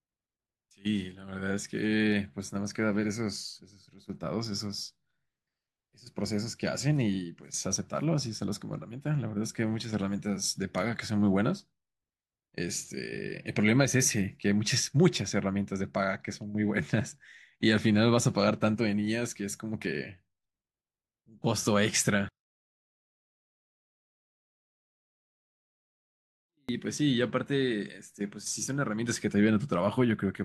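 From 22.29 to 26.69 s, one stereo channel has most likely had its polarity flipped, a fault known as one channel inverted. When the two channels are then summed to mono, everything they share cancels instead of adding. Because the speech sits in the centre, the voice drops by about 40 dB and nearly disappears for those four seconds, leaving only a faint residue of whatever differs between the channels before normal level returns.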